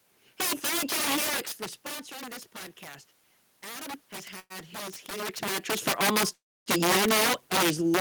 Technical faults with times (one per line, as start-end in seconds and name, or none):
0.00-8.01 integer overflow
3.63-6.97 automatic gain rising
4.39-4.52 call audio freeze
6.33-6.68 call audio freeze